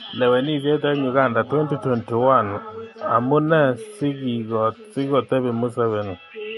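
MP3 compression runs throughout this speech: nothing reaches above 11.3 kHz, and weak detail flickers, giving a watery, swirly edge that likely reflects a starved encoder near 48 kbps.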